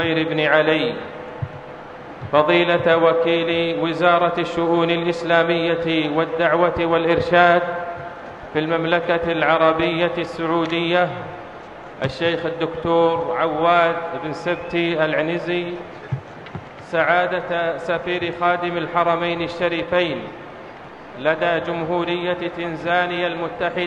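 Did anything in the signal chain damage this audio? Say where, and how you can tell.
No, nothing along the way seems to have hurt this one: I can't pick out any point in the chain where the audio got knocked about, and it holds together the whole way through.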